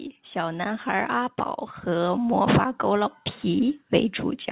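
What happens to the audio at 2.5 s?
At 2.5 s the sound is partway through an automatic gain rising, which runs from 0.32 to 3.85 s. The gain control, hearing too quiet an input, keeps raising its gain, about 12 dB overall, so voice and background swell together. The waveform envelope widens steadily, and the spectrogram brightens uniformly.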